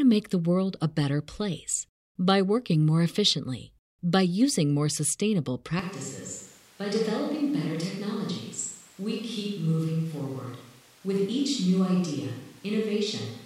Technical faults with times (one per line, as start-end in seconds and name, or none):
5.79-13.46 switch to a distant microphone